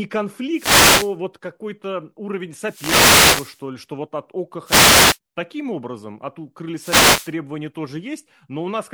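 Speech with four wireless microphone noise hits, at 0.51–1.15 s, 2.60–3.64 s (just before "ли что вот от"), 4.64–5.18 s and 6.75–7.34 s. Each is a swish of static as the FM radio link fades and receiver noise rises over the voice. Unlike constant background hiss, it arrives in separate bursts.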